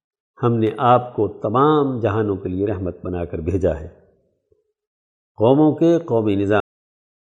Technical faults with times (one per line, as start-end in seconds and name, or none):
6.60-7.29 cut-off end